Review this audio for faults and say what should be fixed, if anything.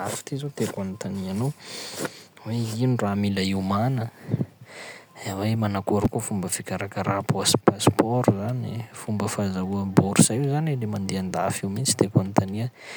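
Chunks out of order at 0.75 to 0.77 s, between "ty zao" and "anontania anao", and at 6.04 s, just before "koa fomba fikarakara". In each case a 5.33 ms chunk (which fits a 256-sample buffer at 48 kHz) plays three and then two chunks late, producing a brief jumbled moment. To prevent it, tag each buffer with a sequence number and reorder before playback or writing.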